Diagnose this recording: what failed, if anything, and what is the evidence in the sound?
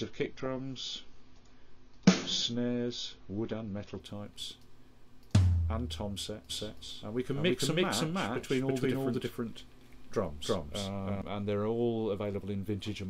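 For the first four seconds the sound is dull and smeared, with nothing above 7 kHz and the swirly, watery artefacts of heavy compression. At 4.0 s it turns clear in one step, with no gap. This is a codec and network stage fault: an adaptive stream starting at a low bitrate. The player opened on a cheap rendition, which fits a 24 kbit/s AAC stream, then switched up to one nearer 96 kbit/s once it had measured the connection.

From 6.50 s to 11.22 s every sound is followed by a second, equally loud copy roughly a third of a second later. The copy is full-band and dry, with no reverberant tail, and it appears and vanishes abruptly at both ends. That is a doubled audio track, likely from the same signal being mixed in twice at the driver or routing stage, with one copy arriving over a slower path, or from an edit that overlaps two out-of-step copies.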